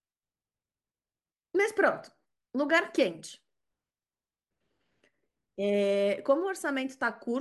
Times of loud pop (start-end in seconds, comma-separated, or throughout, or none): none